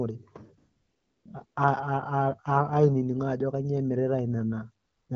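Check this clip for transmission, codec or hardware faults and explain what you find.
The clip has one fault: AMR comfort noise, in three places. It runs from 0.57 to 1.25 s, from 1.45 to 1.55 s, and from 4.85 to 5.09 s. In each gap the phone decided the talker was silent and stopped sending speech frames. The receiver then generated noise from a rough level and spectrum estimate. The real background drops out. A smooth, steady hiss replaces it, switching in and out at those edges. The speech carries light AMR wideband coding, which fits a rate around 12.65 kbit/s.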